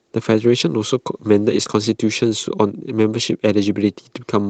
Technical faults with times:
1.63-1.67 short concealed packet loss

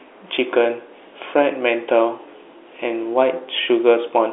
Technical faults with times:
none

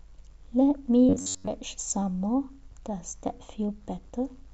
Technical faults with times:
1.09-1.47 robotic sound from repeated short buffers

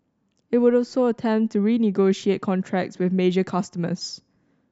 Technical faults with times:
none

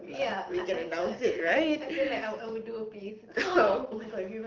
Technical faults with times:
none

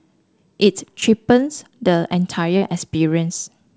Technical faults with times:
1.00-1.04 short concealed packet loss
2.58-2.64 short concealed packet loss

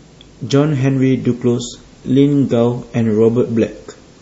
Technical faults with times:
0.85-4.21 adaptive stream at a lower bitrate

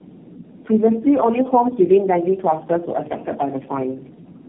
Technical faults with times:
0.00-4.48 tandem speech coding

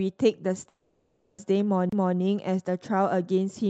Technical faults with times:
0.60-0.66 short concealed packet loss
0.68-1.39 long network dropout
1.89-1.92 CD skip

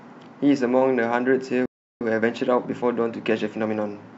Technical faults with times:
1.66-2.01 playback stall
2.01-4.15 time-compressed catch-up

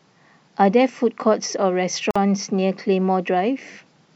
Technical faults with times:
2.11-2.16 gap at a join of encoded pieces

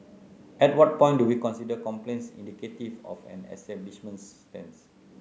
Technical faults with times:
none

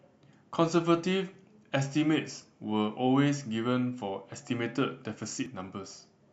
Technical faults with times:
2.40 dropped buffer (overrun)
5.46 dropped buffer (overrun)

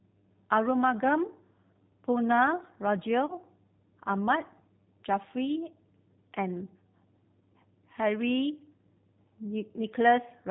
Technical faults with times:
0.00-10.50 G.729 codec
3.26-3.34 VoIP packet loss concealed by the speech codec

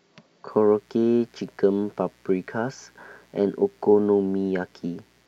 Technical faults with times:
0.48-5.28 mains buzz

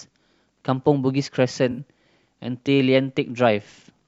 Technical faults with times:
1.71-1.79 AAC frame loss with concealment

